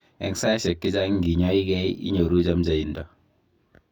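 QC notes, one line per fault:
Throughout: channel delay (comb filtering). One channel lags by around 20 ms, so the mono sum cancels at evenly spaced notches from near 20 Hz, giving rough, slightly doubled speech.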